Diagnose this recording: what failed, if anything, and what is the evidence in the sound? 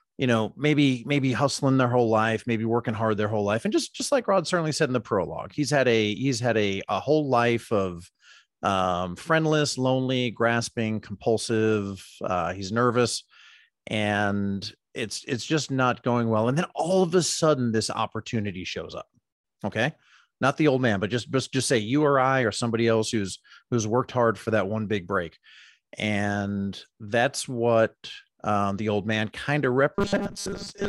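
From 29.95 s to the end at 30.88 s, right after "old man kind of", the speech becomes a rigid, metallic 200 Hz buzz: robotic sound from repeated short buffers. The likely cause is a starved driver buffer looping a 5 ms block while most of the real audio is skipped.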